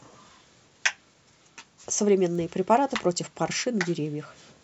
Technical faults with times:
2.35 bit error spike

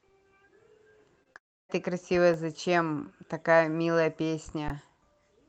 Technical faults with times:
1.23-1.37 short concealed packet loss
1.37-1.71 long network dropout
2.34 underrun with held sample
4.68 underrun with held sample

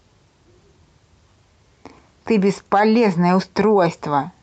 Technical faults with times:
none

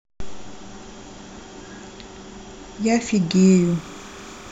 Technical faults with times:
3.31-4.52 timecode bleed

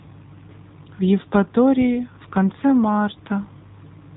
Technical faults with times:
0.00-4.16 AMR narrowband mobile codec

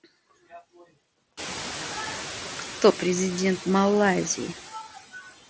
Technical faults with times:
0.00-5.49 noise suppressor artifacts
4.94-5.30 speech cut by the noise suppressor

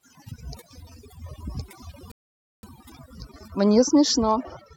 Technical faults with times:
0.00-4.76 overdone noise removal
2.11-2.63 rebuffering stall

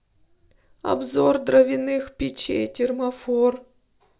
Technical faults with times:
none

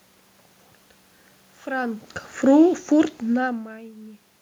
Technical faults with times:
1.67-3.67 automatic gain falling

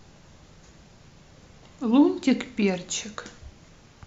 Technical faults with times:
none

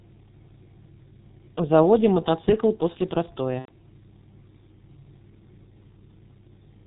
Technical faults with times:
0.00-6.86 G.723.1 codec
3.59-3.71 VoIP packet loss concealed by the speech codec

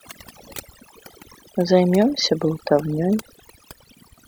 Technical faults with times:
0.00-4.27 overdone noise removal

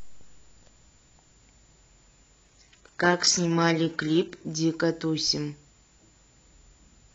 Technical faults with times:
2.45-4.45 adaptive stream at a lower bitrate

